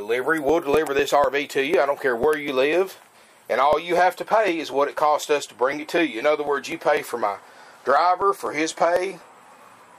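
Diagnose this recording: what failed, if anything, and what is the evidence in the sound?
Driver or buffer stage: periodic USB or driver dropouts, ticking every 0.25 s from 0.24 to 9.71 s, about forty of them. Each skips roughly a millisecond of sound.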